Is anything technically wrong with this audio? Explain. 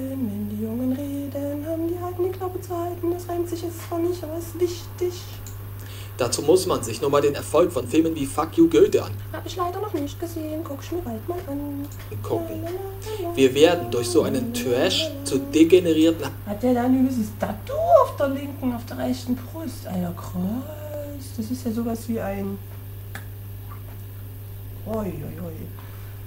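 Yes. A time-stretched section runs from 7.27 to 12.03 s, where the audio plays about 1.35 times faster while its pitch stays the same. Software likely squeezed that stretch to fit a length by dropping short pieces, so it sounds rushed.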